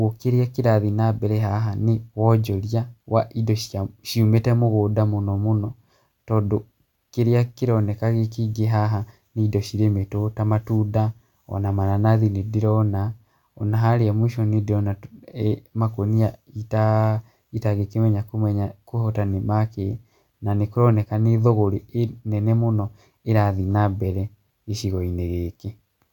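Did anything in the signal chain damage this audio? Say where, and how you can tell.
No, nothing in the signal chain audibly damaged this audio, so there is no stage to point to.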